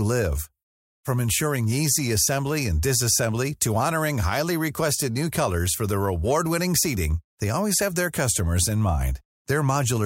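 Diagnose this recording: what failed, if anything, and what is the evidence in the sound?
No stage of the chain shows a failure: the speech runs continuously with no audible dropouts, level jumps, distortion or timing disturbances at any point.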